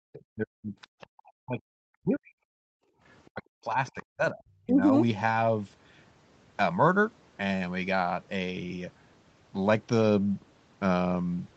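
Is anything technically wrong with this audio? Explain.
Yes. Between 0.06 and 1.61 s, 1.98 and 2.5 s, and 3.32 and 4.82 s, the speech sinks by up to about 40 dB and thins or breaks apart. This is likely speech suppressed in double talk, where the echo canceller ducks everything while both ends speak at once.

At 1.01 to 1.07 s, 3.09 to 3.43 s and 3.86 to 4.03 s, a faint second voice surfaces, about 25 to 35 dB below the talker. That is likely the other side's voice leaking through from the loudspeaker as uncancelled echo.

From 2.78 to 3.03 s the room sound drops out by about 25 dB, then returns. This is background gated by the echo canceller, which clamped the microphone hard while the loudspeaker played.

Nothing above 8 kHz comes through. That matches the band limit of the call's Opus path at a rate near 20 kbps, and is expected rather than a fault.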